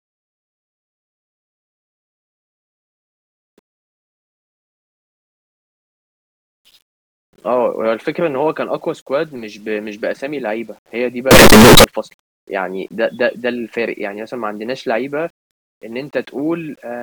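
From 11.31 to 11.84 s the speech turns into a blast of harsh, buzzing distortion at close to full level, with the quiet moments in that half-second as loud as everything else. It likely comes from signed and unsigned samples being mixed up in the 8-bit stream. Flipping the top bit makes every pass through zero leap across the whole range, so even low-level sound becomes a violent square-edged roar.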